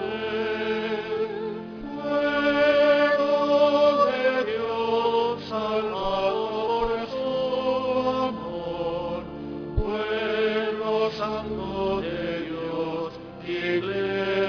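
Aliasing runs through the whole clip, from start to finish. The sample rate was lowered without first filtering the top end. Everything above the new fold point at 5.5 kHz mirrors back down to false pitches that bear no relation to the original. The result sounds gritty and metallic. The folded energy sits around 25 dB below the main sound. The spectrum runs hard right up to the band edge. This fits a drop from 48 kHz to 11 kHz.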